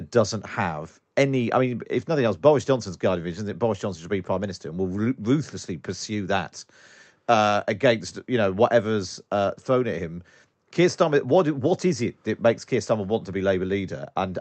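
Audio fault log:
Nothing to log here, just speech coming over a call link that's doing its job, with the top end reaching up to around 8 kHz as you'd expect from that kind of connection.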